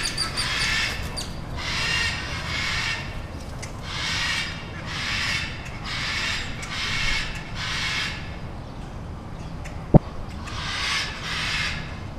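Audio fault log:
9.94–9.97 s DAB burbling: a brief burble as short noise blips hit single sub-bands across what sounds like a few MP2 frames. Bit errors, pointing to a rate near a tenth of a percent, slipped past error correction and corrupted the MP2 audio data.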